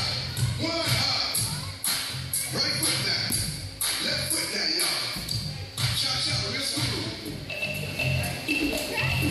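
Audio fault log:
1.49 s, block of digital silence: a tiny hole of about 2.9 ms where the audio drops straight to silence and snaps back with no fade, so it comes across as a tick or dip. That length fits a 128-sample buffer that wasn't filled in time.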